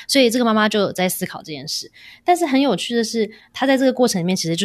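At 3.39 s the decoder drops compressed frames: a run of coded audio is either missing from the stream or rejected as damaged, so playback jumps straight past it. The gap of roughly 50 ms fits a couple of frames of about 23.2 ms each. In the speech, a small piece of sound simply vanishes.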